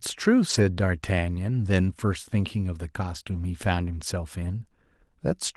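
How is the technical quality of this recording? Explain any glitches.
The recording has network packet-loss damage in two places: one near the start, and a cluster just after three seconds.

At 0.49–0.59 s, 3.15–3.21 s and 3.28–3.38 s there is a lost packet rebuilt from error correction. The decoder played low-bitrate redundant copies carried in the following packets, so the speech continues but sounds rougher and noisier for 40–60 ms each time.

At 3.23–3.28 s there is a short concealed packet loss of about 20 ms. The receiver extrapolated the preceding sound to fill the gap, producing a brief smear or wobble.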